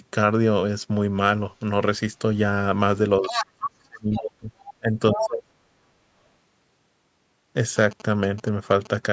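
At 1.59 s a brief scrap of the other side's voice leaking through appears, very faint, far below the talker's speech. It is likely residual echo the canceller missed, showing on a spectrogram as a thin, weak smear of harmonics.

From 3.2 to 3.36 s the talker's speech is suppressed in double talk, dipping by about 10 dB, while from 3.22 to 3.46 s the far-end voice comes through nearly as loud as the talker. The canceller likely turned everything down as both sides overlapped, and the waveform envelope visibly sags.

A deeper stretch of the same suppression runs from 3.52 to 5.52 s. Around a second and a half of it is pushed down, at worst by about 35 dB. Leaked far-end fragments intrude at 4.13 s at a moderate level, at 4.69 s more quietly, and from 5.15 to 5.28 s almost at full strength. On a spectrogram they appear as competing harmonic stacks between holes in the talker's energy, all confined below 8 kHz by the call's microphone processing.

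From 7.77 to 8.96 s GSM signalling bursts produce a galloping dit-dit-dit of short buzzes, about 20 dB below the speech. A nearby 2G phone's radio bursts were rectified by the audio circuitry. They show as regular vertical lines repeating at about 217 Hz, with harmonic striping across the band.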